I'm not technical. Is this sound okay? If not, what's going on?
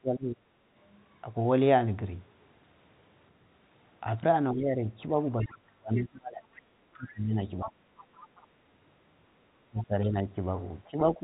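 No. The talker's voice keeps getting turned down, which is speech suppressed in double talk. It happens at 0 to 0.46 s, 4.52 to 7.73 s, 9.68 to 10.27 s, and from 10.9 s to the end. The early dips are deep, the later ones milder. The likely cause is both sides talking at once, so the call's echo canceller muted its own talker too.

There is also the other side's voice leaking through: faint scraps of a second voice at 5.43 to 5.57 s, 6.55 to 6.61 s, 8.0 to 8.47 s and 9.78 to 9.84 s. The likely cause is the echo canceller missing part of the loudspeaker sound picked up by the microphone.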